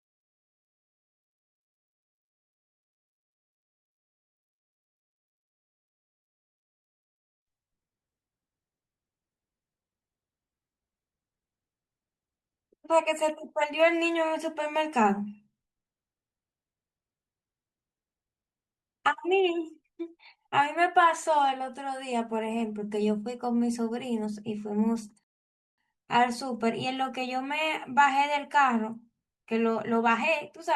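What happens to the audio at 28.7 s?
Nothing goes wrong at 28.7 s; the speech there plays through intact, with no dropout, click, distortion or other fault to be heard.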